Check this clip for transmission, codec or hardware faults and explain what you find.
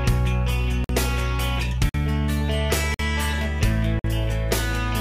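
The audio is being delivered in one-second chunks, and the playback or decoding chain leaves a gap between chunks of about 50 ms at each join: at 0.84, 1.89, 2.94 and 3.99 s. Silence is left at each join, so nothing is dropped; the sound simply stops and resumes. Each join is heard as a brief hole of silence, recurring at a steady one-second rhythm.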